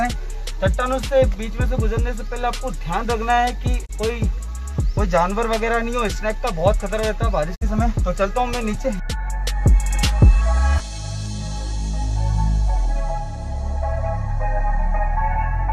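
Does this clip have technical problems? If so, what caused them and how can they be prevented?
Yes, there is a digital broadcast dropout at two points. The receiver stopped getting valid frames and muted until clean data returned. At 3.85 to 3.91 s the sound fades out over about 20 ms, leaving a 24 ms hole, which fits one lost frame. At 7.54 to 7.63 s a 48 ms gap points to two lost frames. The audio sent during those gaps is gone. A stronger signal or better antenna placement would help prevent this.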